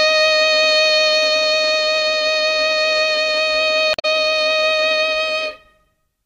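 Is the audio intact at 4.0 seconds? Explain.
No. Damaged data in a compressed stream disrupts the music from 3.91 to 4.05 s, a span of about 0.14 s that covers the 4.0 s mark. Corrupted bytes in that stretch of the encoded file leave the decoder unable to read its frames properly. It loses sync and has to hunt forward for the next valid frame header, so for that instant the music gives way to a chirp, squawk, click or short hole.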